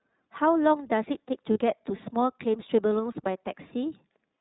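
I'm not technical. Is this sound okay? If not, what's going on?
No. The whole clip has passed through the iLBC codec, a phone-call compression method. Nothing above 4 kHz survives, so the speech sounds narrow and muffled, with a plainly audible rough, slightly synthetic edge from the compression.

There are also lost iLBC frames from about 1.52 to 1.59 s. A short piece of audio never arrived, and the decoder filled the gap by repeating the last bit of sound with some added noise. It comes across as a brief held, buzzy vowel before the speech snaps straight back.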